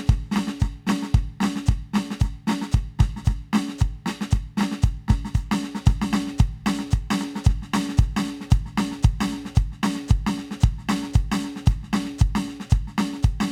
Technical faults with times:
none

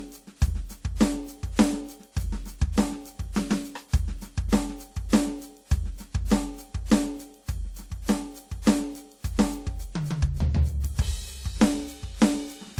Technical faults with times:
0.00-12.79 transcoding between lossy codecs

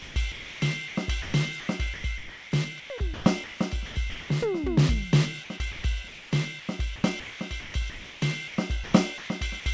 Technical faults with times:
0.00-4.30 sound chopped by the voice detector
5.72-9.66 sound chopped by the voice detector

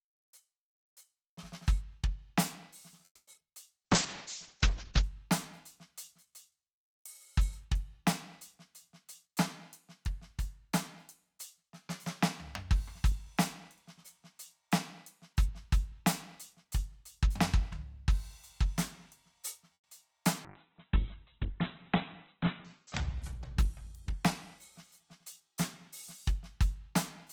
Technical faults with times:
3.05-3.29 call audio freeze
3.33-3.51 repeated packet loss (robotic sound)
3.80-6.58 jitter buffer slow-down
3.86-5.09 call bitrate drop
9.04-17.94 jitter buffer speed-up
19.74-19.86 call audio freeze
20.10-20.13 short concealed packet loss
20.46-26.65 call bitrate drop
22.37-26.62 jitter buffer speed-up

